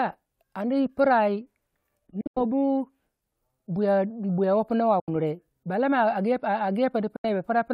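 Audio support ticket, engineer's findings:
Bluetooth dropout, likely packets missing the link deadline to the headphones, output muted until good packets resume. 2.21–2.38 s: broken gaps totalling about 137 ms, longest about 91 ms. 5.00–5.09 s and 7.16–7.25 s: single holes about 76 ms each. Silences with abrupt or briefly faded edges, speech picks up further along as if it had kept playing, so material inside each gap is lost.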